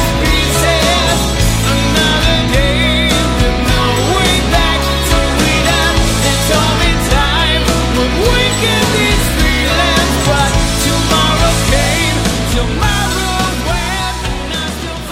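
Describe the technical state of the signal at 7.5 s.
At 7.5 s the signal is intact, with no audible technical fault at that point.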